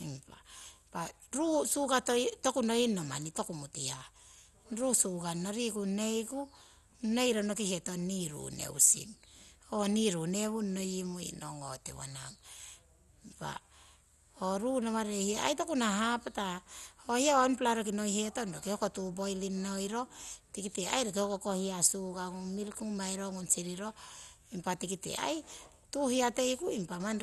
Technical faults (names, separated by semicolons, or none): MP2 compression